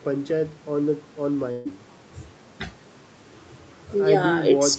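At 1.51 to 1.67 s, a burst of packet loss hits the speech. The receiver stretches the last sound and fades it down for about 140 ms. That speech is gone.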